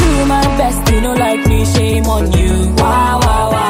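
No technical faults can be heard at any point in the audio.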